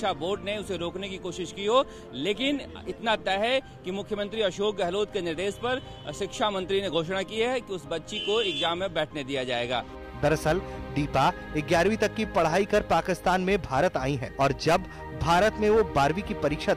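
No technical faults can be heard anywhere in the clip. Nothing in it points to a problem in the path the audio took.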